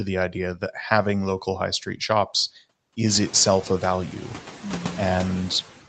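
Noise suppressor artifacts run through the whole speech clip. The suppressor pulls steady background noise down by about 10 dB, so the floor drops between phrases and swells back under speech. The residue is strongest after roughly 3 s, when the room noise rises by about 17 dB. On a spectrogram, the floor shows as patchy, flickering blobs below 8 kHz rather than an even wash. The waveform's quiet gaps pump.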